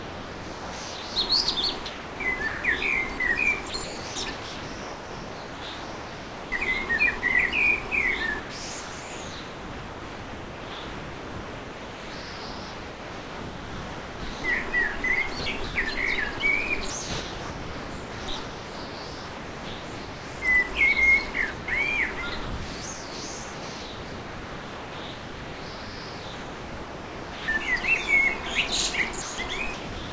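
From 0 to 7.2 s, 8.4 to 20.4 s, 21.5 to 27.5 s and 29.2 to 30.1 s the sound turns choppy, with parts replaced by comfort noise for about 4.3, 9.6, 5.2 and 0.55 s. This is likely sound chopped by the voice detector, which swaps quieter passages for comfort noise.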